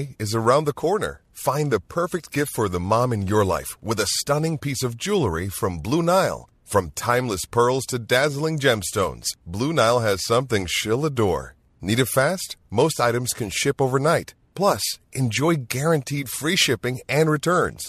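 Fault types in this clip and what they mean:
No faults detected.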